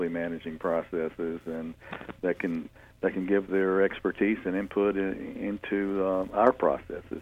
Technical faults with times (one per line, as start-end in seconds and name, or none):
none